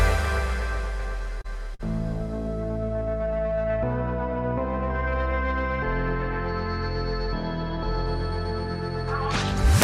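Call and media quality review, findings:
Short stall from a late packet, twice: 1.41–1.46 s (about 30 ms held) and 1.74–1.81 s (about 50 ms held). Jitter buffer ran dry, receiver stretched the last sound until the packet arrived, then resumed at the same point. Playout delay grows by 30 ms, then 50 ms. Unlike loss concealment, nothing is skipped. Symptom is a brief held sustain with a slight buzz or dip, not a gap or a jump in the audio.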